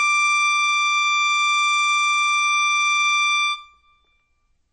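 Throughout the music, nothing is heard above 8.5 kHz, and plainly audible smearing and watery swirl run through the whole clip. That points to a low bitrate near 30 kbps, likely from MP3 compression starving the encoder, which cut the treble and dropped weak frequency lines frame to frame.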